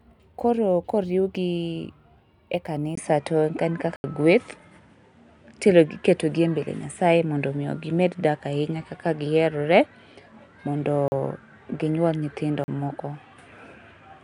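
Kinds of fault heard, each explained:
Input switched to a poorer device: From 2.95 s, after a 20 ms silence, the speech turns duller and boxier for the rest of the clip. Nothing is heard above 10.4 kHz, the level shifts by about 5 dB, and a new background noise sits roughly 55 dB below the speech. The likely cause is the recording input moving mid-take to a lesser microphone or a headset's call profile, with its narrower band, different tone and own noise.
Block of digital silence: The speech drops abruptly to dead silence and snaps back with no fade: an 80 ms hole at 3.96 s, and shorter 40 ms gaps at 11.08 s and 12.64 s. A run of samples was replaced by zeros, typically when the audio program fails to fill its output buffer in time, so whole blocks go out empty.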